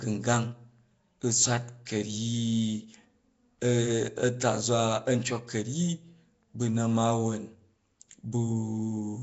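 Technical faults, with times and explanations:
Throughout, Nellymoser compression: the speech has a rough, hissy halo and a smeared, underwater feel, and the damage is plainly audible, with nothing above 7.7 kHz. The likely cause is Flash's old Nellymoser Asao microphone codec, at a rate that sounds like about 32 kbps. It codes short blocks with a fixed, tiny bit budget, so weaker bands get no bits and are filled in with noise, which produces the hiss and blur.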